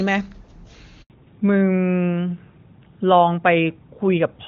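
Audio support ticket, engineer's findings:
Handover gap, 1.02 to 1.10 s: speech dies out within a few tens of ms and sits dead silent for 80 ms. Network handover; no frames arrived while the call switched links, so whatever was said in there is just gone.

Fallback to narrowband, 1.10 s to end: nothing above 4 kHz, duller and rougher. Before the gap the HD Voice sound is clean, consistent with AMR-WB near 23.85 kbit/s. After it, the band limit fits a drop to AMR-NB, probably 12.2 kbit/s.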